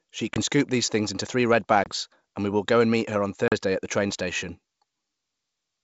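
At 0.34 s, before "scoop these things into", at 1.84 s, after "things into three red", and at 3.48 s, after "and meet her on", packet loss on an ADPCM call cuts hard silent holes of 20, 20 and 40 ms, roughly one packet, one, and two. Unlike a plain dropout, each gap is followed by slightly distorted speech while the decoder's predictor resynchronises.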